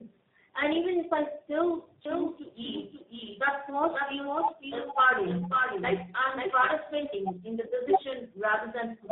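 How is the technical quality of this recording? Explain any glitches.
Quality is degraded throughout by tandem speech coding: G.726 at 24 kbit/s, then G.711, then G.729A at 8 kbit/s. Each coder re-encodes the last one's errors, so the speech sounds rougher, more muffled and warblier than any single codec, with nothing above 3.8 kHz.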